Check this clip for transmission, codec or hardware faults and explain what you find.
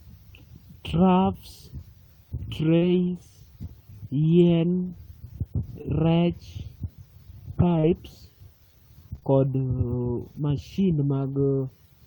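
The clip has one transmission fault: scattered short gaps in the speech between 2.77 and 11.24 s. Around five brief hiccups appear, heard as small ticks or momentary smears where the sound seems to stall and carry on. The longest lasts only about 40 ms. Lost or late packets cause them. About 140 ms of audio went missing, and the receiver covered each hole by extending the preceding sound, reworking 400 ms in total. The concealment touches only around 2% of that stretch.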